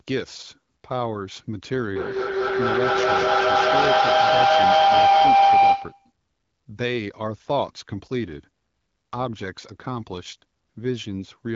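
From 1.96 s to 6.12 s a feedback howl takes over the speech. Sound from a loudspeaker is reaching a microphone on the same call and returning with more gain each pass, so the repeats grow rather than decay and collapse onto a single tone near 700 Hz. It swells to about 10 dB above the speech and pulses at roughly a 200 ms cycle, the round-trip delay of the loop, until the loop is broken.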